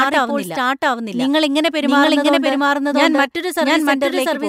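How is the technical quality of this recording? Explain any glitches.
The recording has one clear fault, a doubled audio track running through the whole speech clip. A second, full-band copy of the speech trails the original by roughly 0.7 s at about equal level, likely because the same audio reached the mix twice through paths of different latency. It sounds like an overlapping echo with no decay or room tone. On a spectrogram, each syllable's pattern repeats intact about 0.7 s later; the waveform shows matching envelopes offset by the same gap.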